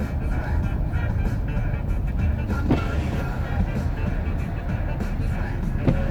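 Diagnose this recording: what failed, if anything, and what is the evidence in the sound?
Nothing in the chain audibly failed: no stage from capture through playback leaves a defect anywhere in the audio.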